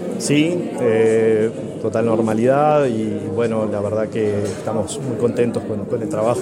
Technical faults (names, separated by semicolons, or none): Bluetooth SBC bit pool drop